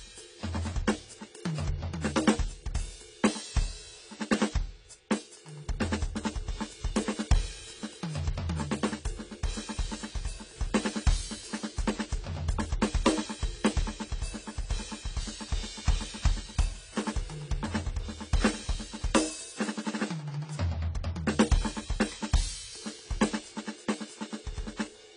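From start to finish the music sounds dull and smeared, with nothing above 10 kHz and a warbly, fizzy texture on sustained tones. That's likely heavy AAC compression, with AAC-LC starving the spectrum at a bitrate that sounds like roughly 24 kbps.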